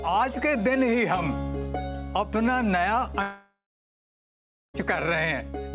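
At 3.22 s the sound breaks off, likely from a long network dropout. The receiver stretches the last sound into a fading buzz for under half a second. About 1.14 s of silence follows. Audio returns at 4.76 s, with roughly 1.5 s missing. The 4 kHz ceiling fits a G.711 mu-law call path.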